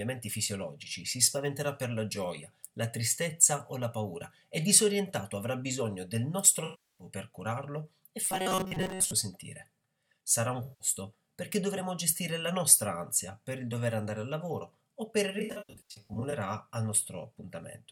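AAC frame loss with concealment first appears from 6.64 to 7.07 s. About 0.34 s of coded audio goes missing, which fits a run of around 16 AAC frames. The decoder fills the gap by reusing the last good spectrum with its phases scrambled, so the passage turns smeared and noisy. The same happens more briefly from 10.63 to 10.88 s, where about 0.17 s is lost.

Robotic sound from repeated short buffers follows from 8.25 to 9.13 s. It is a rigid, metallic buzz at 188 Hz. That pitch points to a segment of about 5.3 ms being played again and again while most of the real audio in that stretch is skipped. The likely cause is new audio arriving too seldom, leaving the playback side to repeat whatever it last had.

AAC frame loss with concealment returns from 15.39 to 16.33 s. This time about 0.53 s is lost in scattered gaps spread over nearly a second, and the longest unbroken gap is roughly a tenth of a second. 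Because of that pattern the sound flickers between intact and smeared patches rather than fading out.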